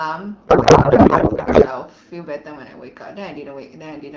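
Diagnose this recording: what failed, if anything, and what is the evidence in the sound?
The failure is at the codec stage: a codec payload misread from about 0.47 s to 1.68 s. For that stretch the speech gives way to garbled noise and warble that barely tracks the talker, then clears abruptly. That suggests the AMR frames were packed octet-aligned but unpacked as bandwidth-efficient, so every field was read from the wrong bits. Packet loss would leave gaps or smeared repeats. Here the frames keep arriving but decode into nonsense. Outside that stretch the AMR wideband (HD Voice) speech is clear, fitting a rate around 12.65 kbit/s.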